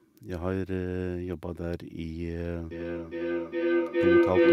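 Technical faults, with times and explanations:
2.71–4.52 s, feedback howl: Two devices in one room on the same call form a microphone-to-loudspeaker loop with gain above unity, so each pass grows. The sound narrows into a tone near 300 Hz, pulsing about every 0.4 s and peaking about 10 dB above the speech.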